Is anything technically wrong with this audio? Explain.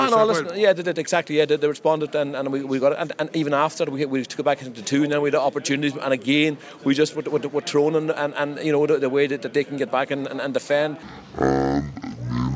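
Yes. From 11.03 s to 12.55 s the sound has a wrong sample rate. It plays at half speed and an octave low (-12 semitones), which fits 32 kHz audio being clocked out at 16 kHz without conversion. Unlike a pitch shift or time-stretch, pitch and tempo fall together.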